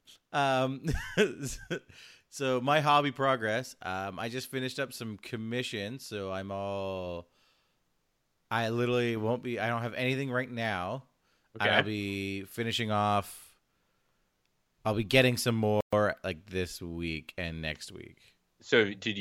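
A playback stall runs from 15.81 to 15.93 s, right after "I'll be getting some": the speech cuts to silence for 120 ms, then resumes with "like this week and". The sound simply halts mid-flow and picks up again. The likely cause is the player running short of data or its output thread being held up, so nothing reached the output until it recovered.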